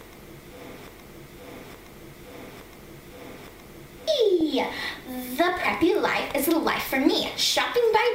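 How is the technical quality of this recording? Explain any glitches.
The technical quality is poor, with a repeating loop and two bursts of digital-radio corruption.

Broken-record loop, 0.87 to 4.08 s: a fragment of about 0.87 s repeats four times back to back. The likely cause is a stalled player or stream resending its last buffered piece, so the audio that belonged there is missing.

DAB burbling at 4.41 s and from 7.18 to 7.61 s: bit errors of around 0.2 % slip past error correction into the MP2 data, and wrong samples put short blips of noise in single sub-bands. The result is a brief burst of blips, then a longer one.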